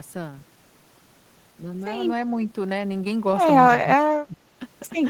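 Speech dips sharply from 3.82 to 4.38 s, by around 20 dB, then again from 4.57 to 4.61 s, by about 10 dB. This is speech suppressed in double talk, likely from echo cancellation.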